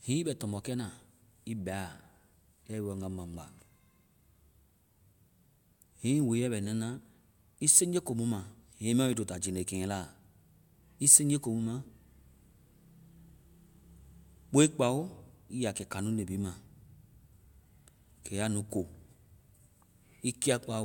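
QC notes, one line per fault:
Nothing to flag here; the speech comes through without any problems worth noting.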